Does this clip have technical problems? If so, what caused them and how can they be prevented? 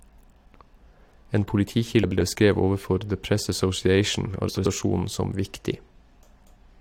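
Yes. Frames out of order: adjacent runs of frames were decoded in swapped order at 0.54–0.67 s (64 ms blocks), 2.03–2.21 s and 4.48–4.66 s (85.3 ms blocks), which fits frames of about 21 ms. Each stretch plays with its halves exchanged, producing a garbled flutter, though no time is lost. Reordering packets by sequence number in a jitter buffer before decoding prevents this.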